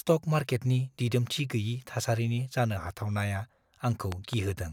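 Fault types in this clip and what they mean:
Loud pop: Two sharp pops in quick succession between 4.12 and 4.35 s, near the end of the speech, peaking roughly 15 dB above the surrounding level. The speech continues underneath without a break, so this is an added transient rather than a dropout. The cause is likely a voltage step or pulse entering the chain, such as a plug, switch, static discharge or driver glitch, which the downstream circuitry shapes into a brief thump.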